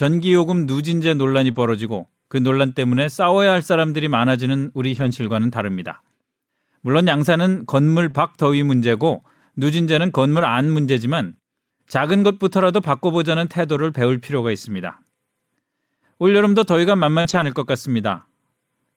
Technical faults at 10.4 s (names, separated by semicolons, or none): lost packet rebuilt from error correction